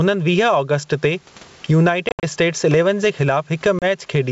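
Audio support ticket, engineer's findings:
Gain pumping throughout: level ducks under each loud syllable, roughly 20 dB swing. Likely cause: input gain far too high, fast limiter clamping every peak.

Packet loss on the ADPCM call, 2.09–2.24 s and 3.79–3.85 s: hard-edged silent holes, about 120 ms lost in scattered runs up to 70 ms, then 30 ms. Decoder predictor and step size desync, so the speech comes back slightly distorted before settling.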